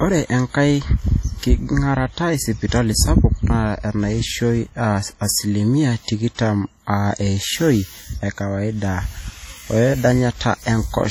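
A speech recording carries heavy transform-codec damage for its whole length. The sound rings and turns washy, with a hiss that rises and falls with the level of the speech and weak spectral detail dropping out. That pattern is likely WMA compression at a low bitrate, around 32 kbps, where coarse quantisation spreads noise over long blocks and zeroes quiet components. Content still reaches about 20.1 kHz, so the damage shows up as smearing and noise rather than a band-limit. There is also a pre-echo from 6.35 to 6.39 s. A sharp onset lands late in a coding block, and the quantisation noise sized for that loud attack also fills the quiet stretch just before it. The result is about 41 ms of hiss ahead of the onset, and the attack itself sounds softened and blurred instead of crisp.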